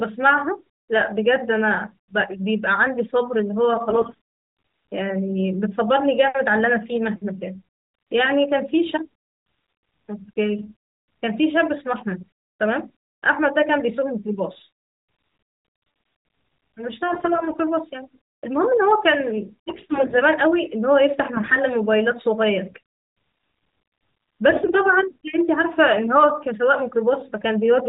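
AMR bit errors strike at 3.90–4.19, 10.58–10.74, 17.08–17.58, 19.70–20.22, 21.34–21.59 and 24.50–24.81 s. Flipped low-protection bits misplace excitation pulses and skew gain and spectral values. Pitch and level roughly hold but the speech turns hoarse and gargly. A spectrogram shows smeared, ragged harmonics below the 4 kHz cutoff of the light AMR-NB coding, which fits the 12.2 kbps mode. The waveform keeps its envelope.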